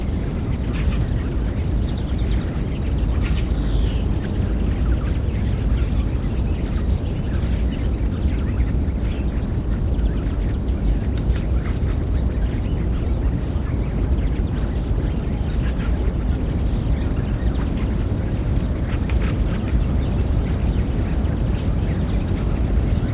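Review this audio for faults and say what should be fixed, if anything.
Skip ahead at 7.86 to 7.88 s: about 0.4 s of audio was dropped while later audio was already queued, so playback jumps straight forward with no fill, and the sound on either side of the gap is butted together almost directly.

Jitter buffer speed-up from 7.96 to 9.54 s: right after the jump, the receiver was still holding more audio than it targets. It trimmed many short pitch-period slices, roughly 150 ms in total, so the sound runs at about 108% speed with unchanged pitch and feels hurried.

Both faults point to bunched packet arrival overflowing the jitter buffer. A larger or more adaptive buffer target, together with steadier network delivery, would prevent the drop and the catch-up that followed. The G.711 call path's 4 kHz band limit is expected for that codec and needs no change.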